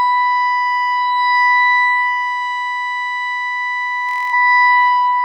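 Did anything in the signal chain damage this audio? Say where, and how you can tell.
Yes. The damage is a Bluetooth stutter on the wireless link, between 4.09 and 4.34 s of the music. For about a quarter of a second, a short slice of audio repeats rapidly in a buzzing, machine-gun pattern. The music then resumes further along, with roughly 0.23 s of material missing, which fits a run of about ten lost packets. Packets arrived late or not at all, and the receiver replayed its last buffer until fresh data reached it.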